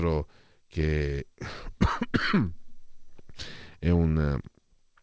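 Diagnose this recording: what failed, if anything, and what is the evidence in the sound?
Nothing in this speech recording has failed: it has passed through a call path that is working as designed, and its content stops at 8 kHz, which fits a wideband codec such as G.722 at 64 kbps.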